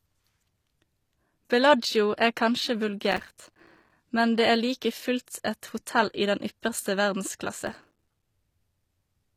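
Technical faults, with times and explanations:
Throughout: likely HE-AAC compression, around 24 kbps; treble rebuilt from copied lower bands sounds plainly gritty and lispy on s sounds, with nothing above 15 kHz.
3.12–3.92 s and 7.67–8.23 s: processor overload crackle, first after "er kanskje" and before "men det"; runs of missed buffers, each a few milliseconds, leave hard-edged silent gaps heard as tearing crackle.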